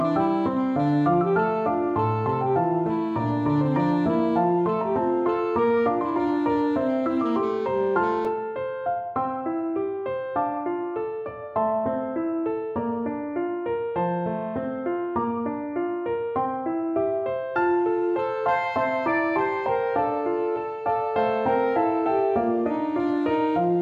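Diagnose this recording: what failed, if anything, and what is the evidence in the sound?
There's a block of digital silence at 8.25 s, a hole of about 2.7 ms, short enough that it comes across as a tick rather than a gap. The sound cuts out and back without any fade. That points to the driver or buffer stage, where the output buffer wasn't filled in time, or to a calculation producing invalid values.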